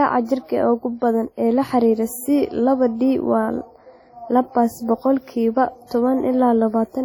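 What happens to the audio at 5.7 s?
At 5.7 s the speech has the same fault it carries from start to finish: low-bitrate audio saved at a high bitrate. Smeared, swirly artefacts from a heavy earlier encode sit in the sound. The band reaches 19.7 kHz, with nothing above. The sound points to a coarse first encode, likely about 32 kbit/s WMA, later re-saved as roughly 181 kbit/s MP3. That second pass cannot restore what was lost.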